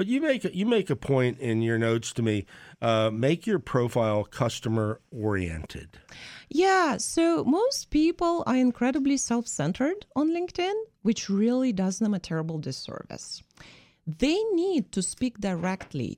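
Listening through the speech recording, nothing stood out as a technical problem at any point.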